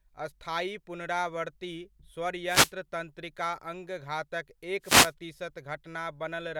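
A short swish of static cuts across the speech from 2.46 to 2.72 s, and a second, slightly longer burst follows from 4.82 to 5.13 s, each lasting about a quarter to a third of a second. Both are wireless microphone noise hits: the FM radio link from the transmitter fades briefly as reflected signals cancel the direct one, so the receiver's own noise rises and masks the speech until the signal recovers.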